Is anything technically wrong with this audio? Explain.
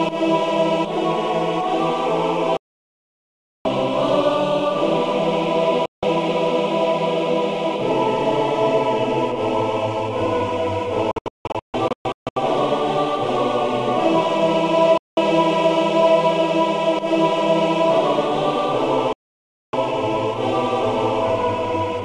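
Yes. Digital broadcast dropouts occur at 2.57–3.66 s, 5.86–6.03 s, 11.11–12.37 s (scattered short holes), 14.98–15.18 s and 19.13–19.74 s. The receiver muted on corrupt frames, so the sound cuts abruptly to true silence, not concealment noise or repeats, and the missing material never returns.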